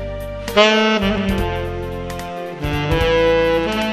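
From 1.18 s to the end, channel delay (doubling) sets in. One channel runs 92.9 ms late, which fits a 4096-sample buffer, and summing to mono leaves a distinct slap echo at equal level. The waveform and spectrogram show every transient and onset repeated 92.9 ms later.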